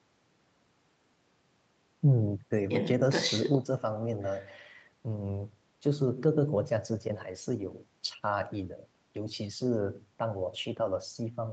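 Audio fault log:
Nothing stood out on listening to the speech, which has the ordinary sound of a call path with its content topping out around 8 kHz.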